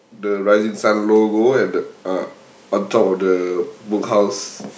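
From 0.22 s to 2.36 s the speech and the background noise behind it swell together, growing about 8 dB louder over roughly two seconds. This is automatic gain rising: the gain control judged the input too quiet and turned itself up gradually, lifting everything at once.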